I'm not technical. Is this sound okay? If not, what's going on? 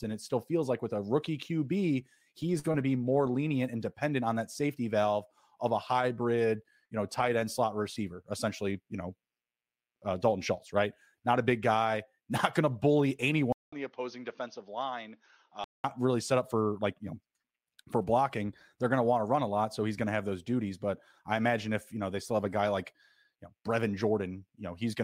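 No. From 13.53 to 15.84 s, just after "not going to bully", the sound goes quiet for about 0.2 s, then comes back duller, boxier and noticeably softer, with faint new background noise. It returns to normal by "really set up for." This is most likely an input switched to a poorer device, such as another microphone. Unlike a plain volume dip or muffling, the change arrives with a gap and brings its own background noise.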